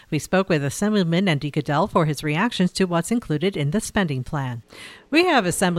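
No dropouts, clicks, distortion or level jumps turn up anywhere in this speech recording.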